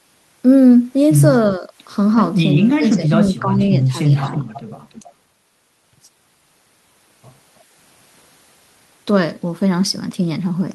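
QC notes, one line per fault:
1.57–1.72 s, 2.56–3.94 s and 4.29–4.47 s, speech suppressed in double talk: the talker's level dips by about 10 dB, then about 15 dB over roughly a second of the long stretch, then a lighter 5 dB. This is likely an echo canceller mistaking overlapping far-end speech for echo and ducking both.
4.24–4.61 s and 4.9–5.13 s, echo leak: a delayed copy of the speech, trailing by 323 ms, comes back at about 10 dB below the speech, then fainter at about 25 dB down. This is likely a loudspeaker path whose echo canceller let residual pickup through and returned it.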